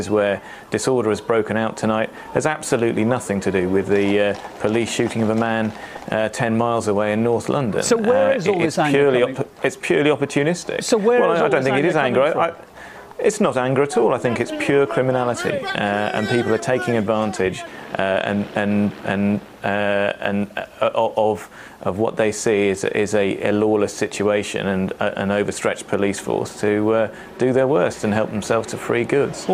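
Nothing goes wrong anywhere in the clip, so there are no faults to describe.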